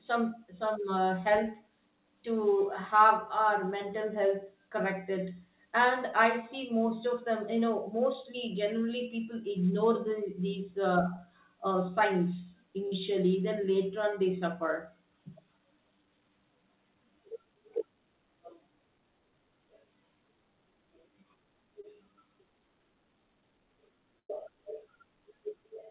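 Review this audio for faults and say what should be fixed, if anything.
Three spots of short concealed packet loss turn up: 11.16 to 11.19 s, 12.87 to 12.94 s, and 21.82 to 21.85 s. Each time a slice of the speech, 20 to 40 ms, didn't arrive in time, and the decoder papered over the hole by carrying the previous sound forward before easing back into the real audio. You hear it as a quick smear or wobble, with the 12.9 s one being the longest.

The bigger one is a burst of packet loss at 24.19 to 24.31 s. About 100 ms went missing in one go, and the receiver stretched the last bit of speech across the gap while fading it down. That gives a held buzz or fading hiss, and then the speech picks up further along with that chunk simply gone. Everything is band-limited to 4 kHz, which fits a narrowband G.711 call at 64 kbps.

To prevent these, improve the network path or add forward error correction and a bit more jitter-buffer headroom so late packets still make it.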